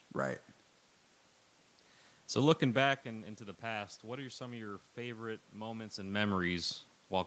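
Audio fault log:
No faults are present in this speech clip. The call path leaves nothing above 8 kHz, room noise sits underneath, and the level shifts around 2.5 s and 6 s as the talker moves.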